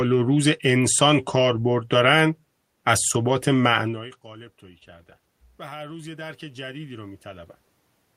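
Speech, with automatic gain rising from 3.24 s to 7.54 s: after the talker moves away around four seconds and the input drops about 23 dB, the gain control slowly adds about 7 dB. The room noise swells along with the voice, which separates it from a talker merely moving.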